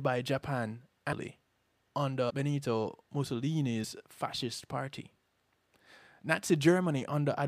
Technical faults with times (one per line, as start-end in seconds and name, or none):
1.11 compressed frames skipped
2.29 compressed frames skipped
3.83 compressed frames skipped